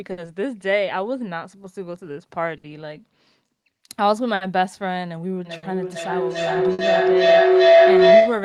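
Throughout the speech, clock drift between sender and receiver is audible: the sender's clock runs roughly 5 percent slow, so the receiver's jitter buffer keeps draining. The result is small, unevenly spaced timing hiccups rather than a steady pace.

At 0.11 s comes the first short stall from a late packet. The buffer ran empty, and the receiver held the last sound for 60 ms until the packet arrived. Nothing is lost, but the sound hangs briefly with a faint buzz or dip, and playback delay grows by 60 ms. The same stall recurs at 2.58, 4.35, 5.57 and 6.73 s.

From 1.20 to 4.27 s, repeated timing corrections run at 97 percent speed. The receiver keeps repeating short slices to cover the slow sender, adding roughly a tenth of a second in total. This is heard as a slightly dragging, unsteady tempo with occasional small stutters.

From 5.45 s to the end, a feedback howl builds. A microphone-to-loudspeaker loop between two devices in the same room gains level on each pass. 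It narrows to a tone of roughly 700 Hz, with the loop repeating about every 0.4 s, and peaks about 12 dB above the speech.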